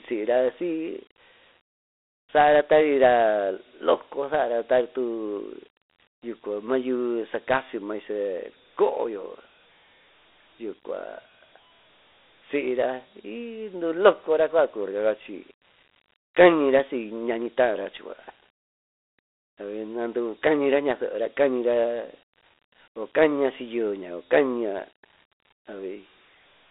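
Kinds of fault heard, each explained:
Dialogic VOX ADPCM: the speech is squeezed through a 4-bit telephony codec, so a gritty hiss rides on it, with nothing above about 3.9 kHz.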